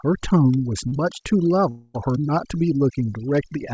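Across the whole speech clip the background has dropped and breaks up into twinkling specks. That is overdone noise removal: a suppressor set too aggressively has pushed individual frequency bands down or off wherever they came close to its noise estimate, and the quieter parts of the voice were swept away along with the noise. The G.722 call path running underneath adds its band limit, with nothing above 8 kHz.

At about 0.88 s a brief smear interrupts the sound, lasting roughly 40 ms up to 0.94 s. This is short concealed packet loss: that much audio failed to reach the decoder in time. The receiver bridged the hole by extending what it had just played, then blended back into the real signal. The result is a quick wobble rather than a gap.

From about 1.70 s to 1.96 s there is a longer stretch, around a quarter of a second, where the sound turns into a synthetic continuation of what came just before instead of real audio. 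There is no silence in it, because the filled portion covers the whole gap. The likely cause is a long network dropout: roughly 240 ms of audio never arrived, the receiver kept extending the last sound across the hole, and playback then resumed further on without the lost part.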